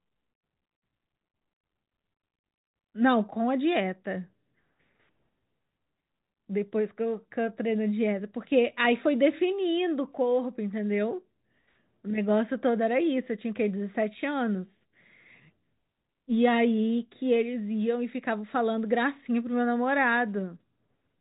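Nothing's wrong with this speech clip; it's just ordinary telephone-band audio, with nothing above about 3.8 kHz, the way a normal phone line sounds.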